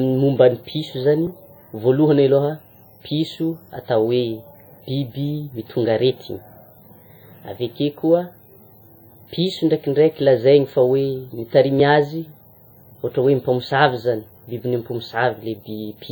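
Throughout the speech, the sound rings and smears. A hiss swells and fades with each phrase, and weak detail drops out. This is likely WMA compression, with heavy damage that fits a low bitrate near 32 kbps. Content still reaches about 20.1 kHz.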